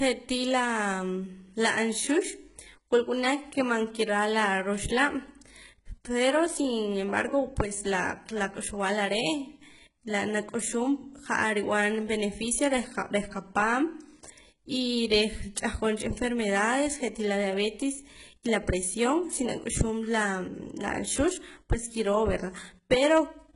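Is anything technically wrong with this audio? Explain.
Yes. Throughout, this speech has gritty, lispy s sounds and a treble with nothing above 11.1 kHz, likely from heavy, very-low-bitrate HE-AAC compression rebuilding the highs by copying lower bands upward.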